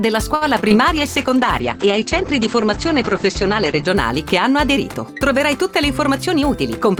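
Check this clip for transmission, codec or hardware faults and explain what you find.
Four kinds of transmission fault are audible, all network and codec related, with no sign of hardware trouble.

A short stall from a late packet at 0.35–0.43 s: the jitter buffer ran empty, so about 59 ms of the last sound is held, then playback resumes intact.

Short concealed packet loss at 0.61–0.74 s and 0.68–0.72 s: roughly 20 ms went missing each time, and the extrapolated fill gives a brief smear or wobble.

A call bitrate drop at 0.97–3.94 s: the encoder fell from 64 to 10 kbps and bandwidth narrowed from 20 kHz to 8 kHz, so the sound turns muffled and coarse.

A jitter buffer speed-up at 6.18–6.96 s: around 50 ms of pitch periods were trimmed to reduce delay, so the audio plays about 6% faster at unchanged pitch.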